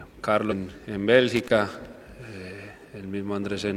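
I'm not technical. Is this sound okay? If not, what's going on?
No, there are two problems. At about 0.47 s, compressed frames are skipped: a handful of frames, roughly a fifth of a second of audio, never play, so the sound jumps ahead. From 1.36 to 1.86 s there's loose connector crackle, where a dodgy contact keeps cutting in and out and adds a rough, scratchy burst.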